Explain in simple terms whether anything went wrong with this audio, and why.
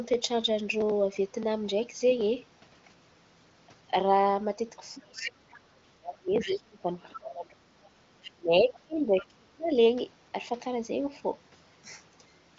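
From about 4.95 to 9.78 s the talker's voice keeps dipping and fading out in pieces. That's speech suppressed in double talk, likely an echo canceller turning everything down while both sides spoke. Short scraps of the other side's voice leaking through pop up at 6.4, 7.0, 7.84, 8.23 and 9.17 s, likely the faint leftovers of the loudspeaker echo that wasn't fully removed.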